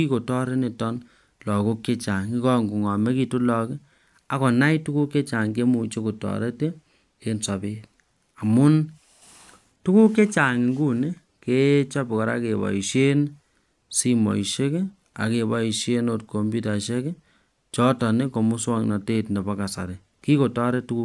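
No technical faults are audible anywhere in this recording.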